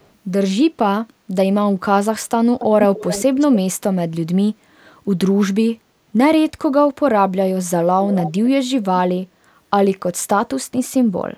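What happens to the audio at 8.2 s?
From 8.04 to 8.33 s there is an echo leak: a faint delayed copy of the speech, trailing about 270 ms behind and roughly 10 dB quieter, sounds like a hollow ghost under the line. The likely cause is a far-end loudspeaker whose echo canceller let part of the microphone pickup return. On a spectrogram the harmonic bands repeat weaker and shifted right; the waveform shows a smaller echoed envelope offset from the original.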